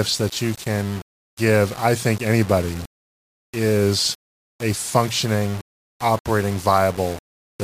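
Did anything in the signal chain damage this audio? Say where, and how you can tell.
Yes. From start to finish the speech carries a grainy, rasping distortion that rises and falls with the voice. It is coarsest on quiet syllables and decays, where the low-level detail breaks up and sputters rather than fading smoothly. The grit sits at roughly 20 dB below the signal. The damage likely happened at a sample-format conversion that reduced the audio to low bit depth without dither, about 5 bits, with plain rounding. The rounding error therefore tracks the waveform instead of forming a steady noise floor.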